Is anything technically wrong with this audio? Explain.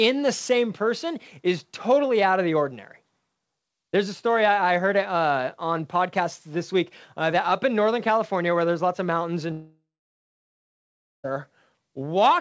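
Yes. From 9.52 to 11.26 s, just after "there's lots of mountains", the sound breaks off for about 1.7 s, most likely a long network dropout. With no audio arriving, the receiver briefly extends the last sound as a fading buzz or hiss, then leaves silence for about 1.4 s. When the sound returns, the missing stretch is simply gone. A natural pause would not have that fading buzz or hiss, and brief packet loss would cause only short glitches. The band-limited sound, with nothing above 8 kHz, fits a wideband call codec such as G.722.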